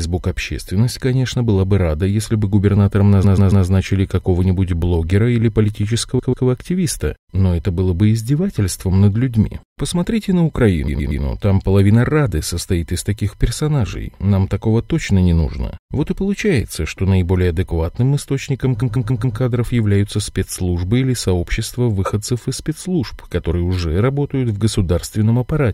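At 3.23 to 3.65 s the speech stutters. A 139.3 ms stretch plays three extra times. These are repeated frames: a run of compressed frames was stored or sent again, so the decoder replays it. At 6.18 to 6.46 s a 139.3 ms block returns twice more. At 10.87 to 11.22 s a 116.1 ms block repeats three times. At 18.81 to 19.37 s a 139.3 ms block loops four times, adding 557.3 ms.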